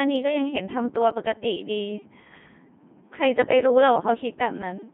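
Speech passed through the Codec 2 vocoder, heard throughout as a robotic, buzzy voice confined to roughly 150 Hz to 3.5 kHz, with heavy codec damage. The decoder rebuilds the voice from sine waves using only pitch, voicing, energy and spectral envelope, and the coarseness fits a 2.4 kbit/s mode. From 3.95 to 4.08 s, bit errors on digital voice radio corrupt a few frames at an error rate of a few percent. The synthetic voice lurches in pitch, level and timbre and breaks into warbling, garbled bleeps, because each flipped bit scrambles parameters for an entire frame.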